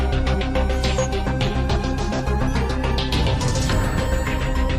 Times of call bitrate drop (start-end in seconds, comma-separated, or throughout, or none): 1.65-4.79